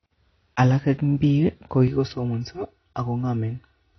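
From the start, the speech sounds dull and smeared, with nothing above about 6.3 kHz and a fizzy, warbling edge on sibilants. This points to AAC compression as the likely cause, at a low bitrate that fits roughly 24 kbps AAC-LC, with plainly audible codec damage.

At 1.88 s the sound turns hollow and phasey until the end. This is channel delay causing comb filtering: one channel lags the other by about 3 ms, and summing them cancels shared content at evenly spaced notches, the first near 200 Hz.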